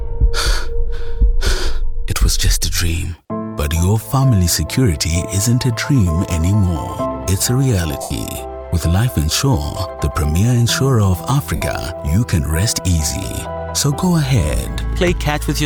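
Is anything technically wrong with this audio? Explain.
Yes. Lost LE Audio frames at 8.02 s (82.5 ms) and 11.56 s (60 ms): Bluetooth LE Audio frames went missing, and the LC3 decoder filled each gap by reusing the last spectrum with randomised signs, fading it after a few frames. Tones smear into noise and sink toward silence.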